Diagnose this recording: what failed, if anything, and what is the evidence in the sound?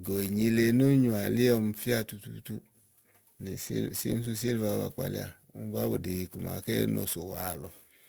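The converter failed with sample clock jitter across the whole speech recording. A hiss-like roughness rides on the louder and brighter sounds and drops away in pauses. Timing scatter of a few microseconds mistimes steep waveform slopes, leaving error roughly 25 dB below the signal.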